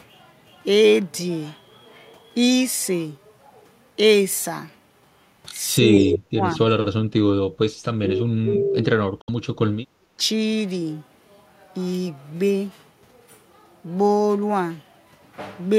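At 5.8 to 6.61 s both ends of the call were likely talking at once, and the echo canceller, unable to tell this talker from loudspeaker echo, turned everything down. The result is speech suppressed in double talk: the voice sinks by roughly 40 dB, dipping for most of that stretch. Inside it, from 5.98 to 6.17 s, the far end's canceller likely failed to clear what its microphone picked up from its loudspeaker. This echo leak sends back a copy of the voice delayed by 181 ms, sitting about 10 dB below the speech as a repeat. From 8.02 to 8.92 s the same double-talk suppression returns, pulling the voice down by roughly 40 dB across almost a second. At 9.21 to 9.3 s audio packets likely failed to reach the headphones in time, a Bluetooth dropout that cuts a 64 ms silent gap, which fits about three lost frames. The sound resumes as if it had played on through the hole. At 9.97 to 10.09 s a brief double-talk clamp dips the voice by roughly 35 dB for about a tenth of a second.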